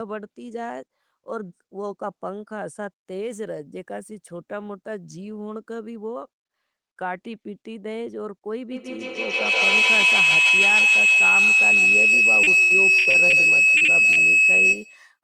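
Speech, with a feedback howl building from 8.71 s to the end at 15.17 s. The call's microphone-to-loudspeaker loop gains level on each pass, so repeats grow rather than decay and narrow to a tone around 3 kHz, peaking about 13 dB above the speech. On a spectrogram this is a bright horizontal line near 3 kHz, pulsing roughly every 150 ms, the loop's delay. From 12.43 to 13.36 s there is repeated packet loss, heard as robotic, choppy sound: five gaps totalling 280 ms, the longest 80 ms, each patched by extending the previous sound. The spectrogram shows smeared, repeated slices and the waveform a stuttering envelope. Short concealed packet loss follows at 13.77–13.84 s and 13.85–13.91 s, each about 40 ms of missing audio filled by continuing the last sound. These are brief smears, visible as short stretched patches where the harmonics flatten before real detail returns. A burst of packet loss at 14.12–14.20 s drops a short run of audio. 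The filled stretch is a held, fading continuation, seen as a waveform tail that decays before the signal resumes further on, with the intervening part gone.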